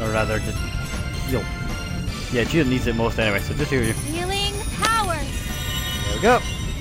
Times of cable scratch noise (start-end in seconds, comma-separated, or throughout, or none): 4.82-5.37